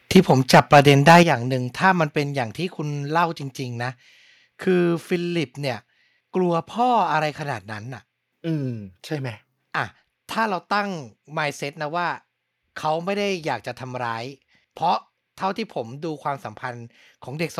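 From 0.15 s to 1.22 s the speech shows microphone overload: the loudest moments are flattened and carry a crackling, distorted edge, with roughly three percent of the waveform clipped. The likely cause is an input volume set about 7 dB too high, so the peaks ran past the converter's limit and their tops were cut off. Unlike a simple level change, this fault adds distortion rather than just making the sound quieter.

Within that stretch, at 0.17 s, the microphone volume is stepped down by about 3 dB, and at 1.23 s, just as the clipping ends, it drops again by about 9 dB. Each time the voice and the background fall together in one sudden step, with no added distortion. This is likely the call software reacting to the overloaded input by lowering the device's gain, which is what separates these abrupt, clean drops from the crackle of the clipping itself.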